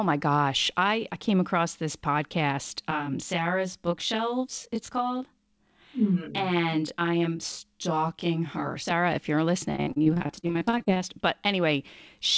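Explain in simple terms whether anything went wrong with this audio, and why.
Yes, two things went wrong. From 2.91 to 8.91 s, right after "came across this podcast", the speech turns rough and slightly doubled. That is channel delay (comb filtering): one channel runs roughly 20 ms late, and mixing the two to mono cancels evenly spaced frequencies.

From 9.72 to 11.02 s, just after "if you're", the speech becomes choppy. This is repeated packet loss: a rapid run of brief dropouts, the longest 47 ms, each patched by stretching the last sound, so about a third of that stretch is filler.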